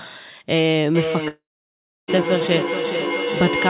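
From 0.95 s to the end, a feedback echo between two devices returns each sound roughly every 0.4 s, thinner and ringing, peaking about 4 dB below speech. On a spectrogram it shows as stacked, evenly spaced copies.

At 1.28 to 2.11 s, the audio briefly continues as a fading buzz, then drops to about 0.66 s of flat silence, likely from a long network dropout.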